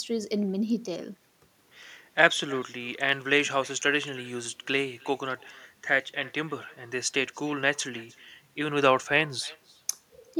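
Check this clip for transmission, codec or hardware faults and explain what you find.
One transmission fault runs through the whole speech clip. Echo with no canceller, throughout: the far end's loudspeaker feeds its microphone unchecked, returning each phrase roughly 300 ms later as a thin copy about 26 dB down.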